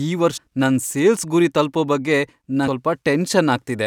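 Jumps at 0.36–0.38 s and 2.67 s skip roughly 0.3 s and 0.2 s of audio: compressed frames skipped, whole 21.3 ms frames never decoded.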